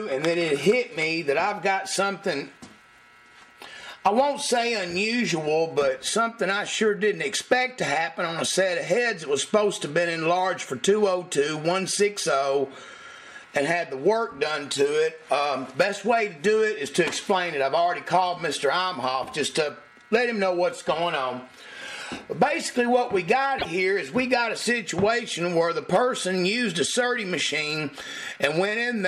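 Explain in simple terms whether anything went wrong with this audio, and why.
Repeated frames at 23.58 s: a 26 ms chunk of audio, about one compressed frame, plays twice, giving a tiny stutter and adding 26 ms.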